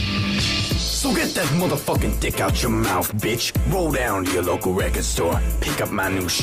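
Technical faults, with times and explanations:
Nothing technical goes wrong anywhere in the recording, so there's nothing to list here.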